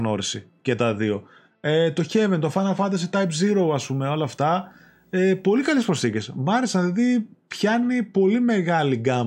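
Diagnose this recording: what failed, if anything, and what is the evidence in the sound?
The analogue wiring picked up video or display buzz from 3.25 s to 6.00 s. A buzz at 59.94 Hz sits under the speech, with hash above it. A very high tone at 15.7 kHz rides along with it. The interference is well below the speech, roughly 45 dB down. A screen or video cable is coupling into the audio path. Its field rate sets the buzz, and its line scanning produces the high tone.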